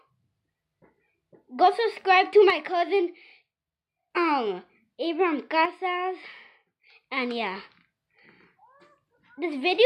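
From 2.50 to 4.11 s and again from 5.65 to 6.84 s, the level drops abruptly by about 6 dB and then returns just as suddenly. The likely cause is one channel drops out: with one stereo channel missing, the mono sum keeps only half of the shared content, which accounts for the 6 dB step.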